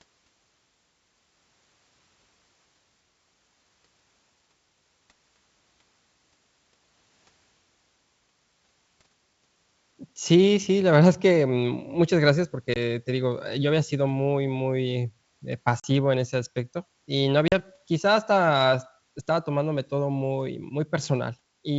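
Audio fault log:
12.74–12.77 s, 15.80–15.86 s, 17.48–17.54 s: packet loss on an ADPCM call, removing about 20, 40 and 40 ms of audio (roughly one, then two packets each time). Silence fills each hole, and the decoder's predictor and step size lose track of the sender's, so speech resumes with brief distortion before settling. Waveform: flat-line gaps with sheer edges. Spectrogram: blank vertical stripes cutting through the wideband G.722 content, then a short broadband smear.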